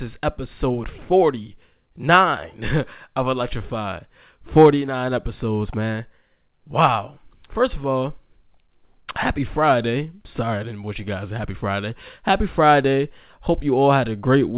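Nothing stood out on listening to this speech, which carries the narrow band of a telephone-style call path with nothing above about 4 kHz.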